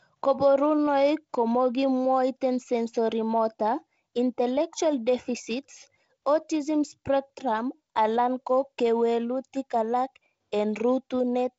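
The speech comes through a G.722 wideband telephone path with a light coding texture and nothing above about 7.7 kHz, and the slightly grainy lower band fits the codec running at its 48 kbit/s rate.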